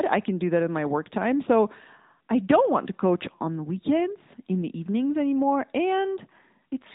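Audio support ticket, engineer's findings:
AMR narrowband mobile codec throughout: plainly buzzy, synthetic speech. Spectrogram shows a hard ceiling at 3.8 kHz. The vocal-tract model's coarse pulse coding fits the 10.2 kbps mode.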